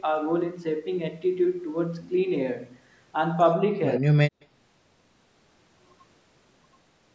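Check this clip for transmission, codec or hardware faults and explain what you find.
Two call-path faults are audible, both brief and close together just after the 4-second mark.

From 3.99 to 4.19 s the speech is suppressed in double talk: for about 200 ms the talker drops sharply, at its deepest by around 40 dB, and nearly vanishes. The likely cause is an echo canceller turning down the near talker along with the far-end echo while both sides spoke at once.

At 4.41 to 4.45 s there is an echo leak: a very faint copy of the speech arrives 91 ms late as a short scrap. It is likely loudspeaker sound that the far end's echo canceller failed to remove and sent back. The band stops at 8 kHz, consistent with the call's microphone processing.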